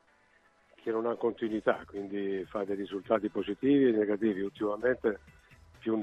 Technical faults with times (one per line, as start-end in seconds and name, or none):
none